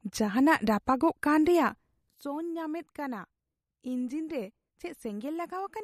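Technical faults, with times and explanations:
Throughout: MP3 compression, plainly audible on the speech. Nothing survives above about 14.9 kHz, and the remaining detail has a watery, swirly quality as weak frequency components drop in and out between frames. This likely comes from a low-bitrate encode, around 48 kbps.
2.09 s to the end: sudden gain jump, with the level dropping by about 12 dB from one sample to the next and staying there. Speech and background noise fall together, the likely cause being a digital gain change applied without any ramp.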